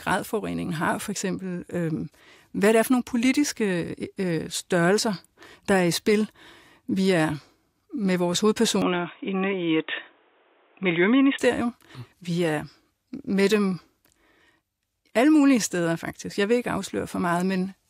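Right after "er med vores", at 8.82 s, the speech suddenly goes dull and a bit boxy. Nothing comes through above 3.8 kHz, and a faint new hiss sits well under the voice. There's no gap and no real jump in level, and the full band comes back at 11.39 s. That's the classic sound of the input switched to a poorer device. Most likely the system dropped to a narrower-band microphone or a headset call profile for a couple of seconds and then went back.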